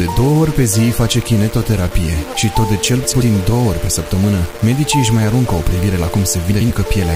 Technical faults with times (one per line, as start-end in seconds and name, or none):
0.00-7.15 low bit depth without dither
3.03-3.22 frames out of order
6.51-6.71 frames out of order